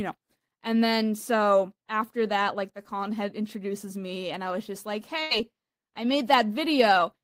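At 2.83 to 2.87 s, between "after that like the" and "head introduces me and", there is a short concealed packet loss. A few hundredths of a second of the call arrived too late, and the receiver extended the preceding sound for about 13 ms before blending back, leaving about 20 ms of speech missing. It is heard as a brief smear or wobble rather than a gap, too short for the fill to fade.

At 5.23 to 5.33 s, right after "I was just like", a burst of packet loss is longer and behaves differently. Consecutive audio was lost, so the receiver prolonged the last sound for about 80 ms while turning it down. The result is an audible held, decaying tail, and the speech resumes with about 80 ms skipped, a jump rather than a momentary blur.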